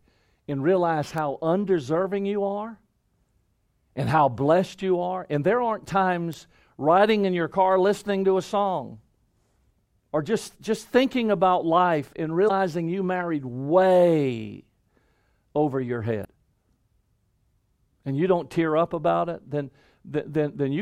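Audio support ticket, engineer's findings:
Single sharp ticks at 1.18 s and 6.33 s, broadband, unrelated to the speech. Bit error spike: one flipped bit in a single sample, value jumping by a power of two and straight back. Probable component: memory or digital link upstream of playback.

Short glitches at 12.45–12.51 s and 16.21–16.26 s, each about 55 ms. Damaged data in a compressed stream: corrupted or lost bytes in the encoded file; decoder misreads frames, loses sync, hunts for the next frame header. Probable component: storage or transport of the compressed file.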